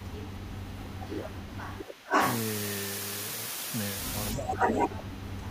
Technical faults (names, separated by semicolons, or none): low bit depth with dither; speech suppressed in double talk; echo leak